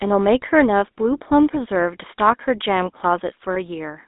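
Right from the start the whole speech clip has that GSM full-rate codec character. The audio is squeezed into roughly a 250 Hz to 3.7 kHz line band, so it's thin and boxy, and the codec damage is plainly audible as a buzzy, gravelly grain on the voice. That comes from the coder rebuilding the voice from a vocal-tract model fed by coarse, regularly spaced pulses, which fits a 13 kbps full-rate coder.

Near the end, from 3.54 to 3.57 s, there's a brief case of lost GSM frames. It sounds like a single 20 ms frame went missing. Instead of a gap you hear the decoder hold the previous frame's settings, which gives a quick rough, metallic smear. It's very short, so it passes almost instantly.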